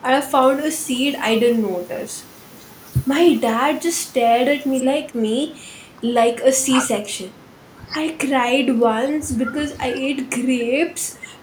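From 0.34 to 4.80 s, pre-emphasis was left on. A 75 µs FM treble boost lacks its matching cut, lifting 10 kHz about 13 dB. Speech sounds thin, bright and sibilant.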